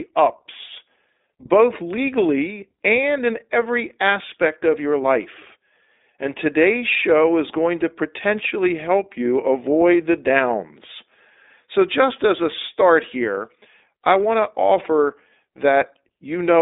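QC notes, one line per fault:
Throughout, iLBC codec: the speech is confined to a narrow telephone band of roughly 250 Hz to 3.7 kHz, with nothing above 3.8 kHz. A plainly audible rough, synthetic edge comes from each 20 ms frame's excitation being coded independently, consistent with a 15.2 kbps mode.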